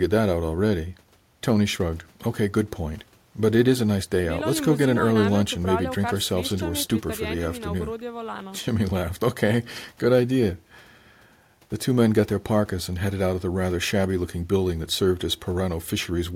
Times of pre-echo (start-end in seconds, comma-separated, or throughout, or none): none